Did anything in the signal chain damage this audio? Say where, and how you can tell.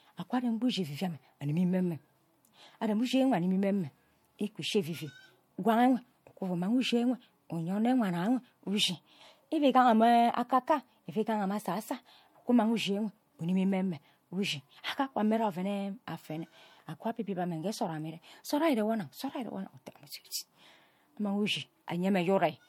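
Yes, at the codec stage: low-bitrate audio saved at a high bitrate. Nothing above 18.7 kHz throughout, likely left by an earlier low-rate MP3 pass that the high rate cannot undo.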